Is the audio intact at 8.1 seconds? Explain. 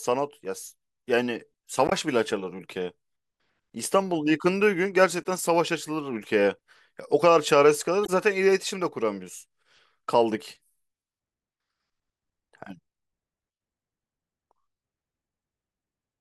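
No. From 8.04 to 8.09 s the speech hits damaged data in a compressed stream: corrupt bytes make the decoder misread frames and lose sync, producing a brief chirp, squawk, click or short hole. A spectrogram shows a broadband smear; the waveform shows a discontinuity.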